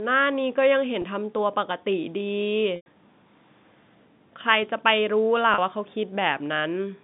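Speech carried over a telephone-band line, roughly 150 Hz to 3.7 kHz, shows packet loss with pitch repetition at 1.02–1.04 s, 2.76–2.86 s and 5.54–5.58 s. The 20 and 40 ms gaps sound like a briefly held, buzzy tone. The 100 ms gap, which fits several lost 20 ms packets, holds and then fades toward silence before the speech cross-fades back. A spectrogram shows frozen, flat harmonic bands, and the waveform shows identical cycles repeating and decaying.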